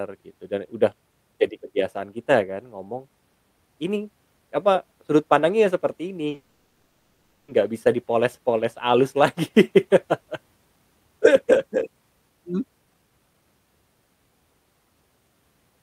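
In this speech clip, right after "pandangnya ya seperti ini", the last sound is held too long from 6.30 to 6.35 s, about 40 ms with nothing lost. This is a short stall from a late packet: the jitter buffer ran empty and the receiver stretched the sound until the packet arrived. The sound is then continued as a drawn-out buzz or hiss from 6.35 to 7.49 s, a 1.13 s insertion that never drops to silence, before "nggak bisa" resumes with nothing missing. This is likely a call audio freeze, with delayed packets leaving the receiver to fill the wait.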